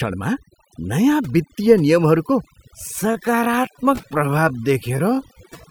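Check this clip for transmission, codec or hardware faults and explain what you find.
Two faults stand out, one across the whole clip and one in its second half.

Throughout, the background drops and breaks up into twinkling specks. This is overdone noise removal: noise reduction set too hard switched off individual frequency bands sitting near its noise estimate, taking the quieter parts of the speech with them.

From 2.71 s to the end, the pace suddenly slows to about 0.68 times normal speed while the pitch stays put, leaving the speech dragging. This is a time-stretched section, likely from software lengthening the audio by repeating short slices to preserve pitch.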